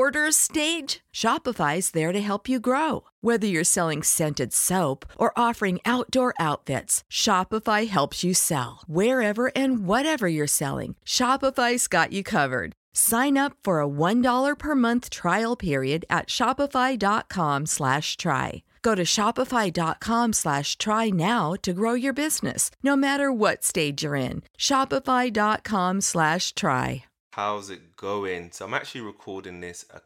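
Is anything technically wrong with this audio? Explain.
No, nothing technically wrong can be heard in this speech recording. There is no fault to point to at any moment in it.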